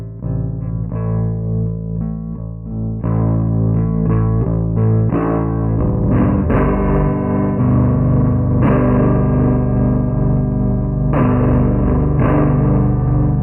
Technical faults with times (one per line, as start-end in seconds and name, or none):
0.00-13.42 stereo read as mono